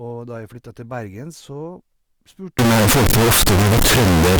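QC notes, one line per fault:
2.59 to 4.40 s, float read as integer: speech turns to a loud, harsh square-ish blast with noise as loud as the voice, likely 32-bit float samples read as 32-bit integers.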